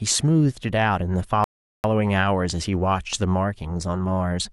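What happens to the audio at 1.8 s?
At 1.8 s the speech is still in a rebuffering stall that began at 1.44 s and lasts until 1.84 s. The player ran dry of downloaded audio and paused, adding about 0.4 s of silence. The waveform shows a flat gap, and the spectrogram shows an empty band before the speech resumes exactly where it stopped.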